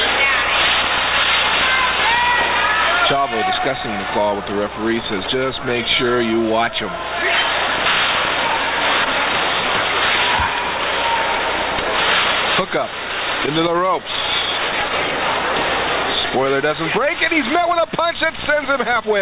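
Nothing technical stands out here; the audio runs along without a single glitch, dropout or odd artefact catching the ear anywhere.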